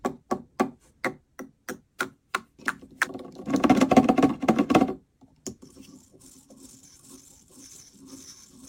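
From start to finish a gritty, inharmonic fizz rides on the sound, growing with loud and high-pitched passages and carrying tones that are shifted, inharmonic copies of the material itself. This is crude rate conversion: the sample rate was raised without any filtering, apparently by picking the nearest existing sample, which fits a change from 44.1 kHz to 48 kHz. The irregular repeated samples leave a distortion running roughly 30 dB below the signal.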